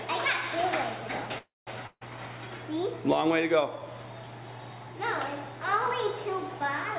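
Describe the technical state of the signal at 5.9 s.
At 5.9 s the audio is intact, with no fault at that moment, only the narrow band of the G.711 mu-law call path, which carries nothing above 4 kHz.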